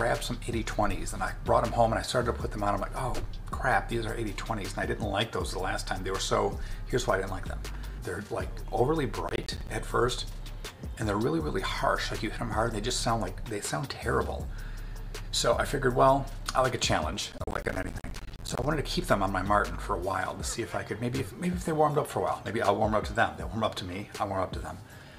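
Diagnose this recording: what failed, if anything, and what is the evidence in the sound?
Processor overload crackle, a driver and buffer stage fault, appears as two bursts of gritty crackle, from 9.28 to 9.69 s and from 17.32 to 18.65 s. The processor repeatedly missed its deadline for buffers of roughly 10 ms, leaving each missed slot silent with hard edges: about fifty gaps in the longer burst, about ten in the shorter. Unlike a single dropout or network loss, these are dense trains of tiny gaps that stop when the load eases.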